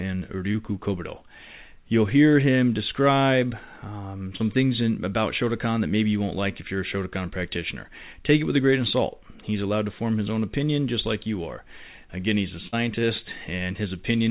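Brief smears occur at 0.52 to 0.56 s and 4.36 to 4.41 s in this band-limited speech call, where nothing is heard above 4 kHz, consistent with G.711 A-law. These are short concealed packet loss: about 20 and 40 ms of audio never arrived, and the receiver filled each gap by extending the previous sound. At 12.67 to 12.74 s, a held, fading stretch followed by a jump forward marks a burst of packet loss. About 50 ms of continued, decaying sound covers roughly 40 ms of missing speech.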